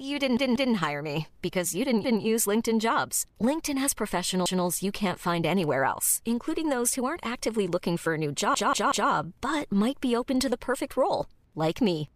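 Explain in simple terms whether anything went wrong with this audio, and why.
Repeated buffer faults at 0.37 to 0.74 s, just before "hire me because you", at 2.04 s after "hire me because you", at 4.46 s, and at 8.55 to 9.10 s, between "looking for a new" and "but might be open". New audio arrived late, so the player replayed its last chunk, about 0.19 s long, which fits an 8192-sample buffer. That chunk sounds twice, three times, or four times at 8.55 s, with a hard jump at each repeat, heard as a stutter.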